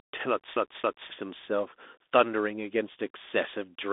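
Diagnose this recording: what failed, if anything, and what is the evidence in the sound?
The codec stage failed: the whole recording went through the Bluetooth CVSD headset codec, a one-bit delta modulator whose step size adapts, which fits a 64 kbps CVSD stream. The speech sits in a telephone band of roughly 250 Hz to 3.6 kHz with nothing above 3.7 kHz. The damage is plainly audible: loud, bright passages outrun the adaptive step and distort, sibilants turn scratchy, and a granular hiss lies underneath.

At playback from storage, the disc was stuck on one turn, the CD stuck on one turn fault, from 0.56 to 1.10 s. A scratch kept throwing the laser back one track, so the same 0.27 s slice of speech plays again, repeating twice, with a brief mute at each jump. The result is an even, mechanical stutter at a fixed interval, quite unlike the irregular dropouts of a network fault.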